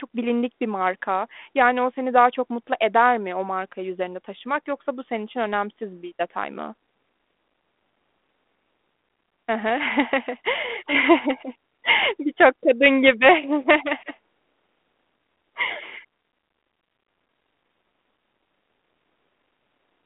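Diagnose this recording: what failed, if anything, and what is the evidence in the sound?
Nothing here has failed: the speech comes over a G.726 ADPCM telephone path at 32 kbit/s, held to a line band of roughly 250 Hz to 3.5 kHz, with only the light coding roughness you'd expect from that codec at that rate.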